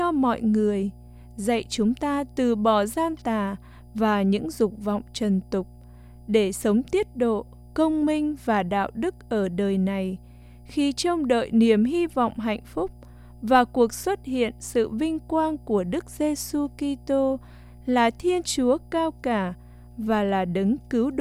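A speech recording with mains hum running through its whole length, a steady low tone at 60 Hz sitting roughly 25 dB below the speech level, with some low harmonics above it. The hum does not change with the talker, which points to the power line being coupled into the signal path, typically through a ground loop between connected equipment or the field of a nearby transformer. The 60 Hz fundamental indicates a 60 Hz supply.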